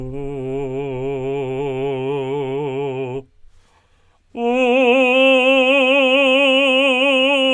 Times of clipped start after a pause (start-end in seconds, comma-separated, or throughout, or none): none